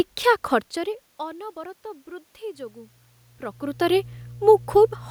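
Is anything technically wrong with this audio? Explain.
Yes, there is one fault in this speech clip. Mains hum enters at 2.54 s, just after "ଖର୍ଚ୍ଚରେ ଅନବରତ ବୃଦ୍ଧି", and runs to the end. A ground loop or nearby transformer is coupling the power line into the signal. It sounds like a steady low 60 Hz drone, about 20 dB below the speech.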